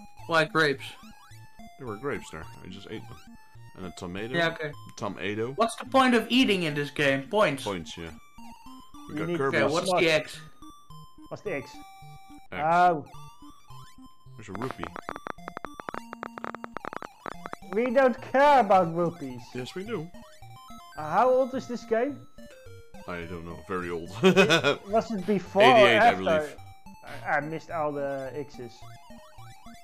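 From 9.51 to 10.50 s there are CD scratch ticks: seven brief ticks, the longest only about 5 ms, recurring at a steady pace as a blemish on the disc passes the laser on each revolution. Where error correction cannot rebuild the lost data, the player patches or mutes those samples, so the sound catches with regular ticks. On a waveform they show as tiny notches or flattened spots, and on a spectrogram as thin, evenly spaced vertical lines.

From 14.55 to 17.87 s a train of clicks rides over the audio, roughly forty similar sharp pulses at about 12.7 per second, unevenly spaced, peaking about 10 dB above the surrounding sound. They continue through quieter gaps, giving an erratic ticking or popping. The likely cause is interference from nearby equipment or a faulty connection injecting repeated pulses. A waveform shows narrow spikes standing above the signal, and a spectrogram shows broadband vertical streaks at irregular intervals.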